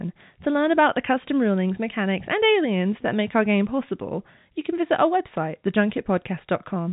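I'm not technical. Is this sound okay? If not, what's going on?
Yes, nothing in this speech recording stood out as a problem when I listened to it.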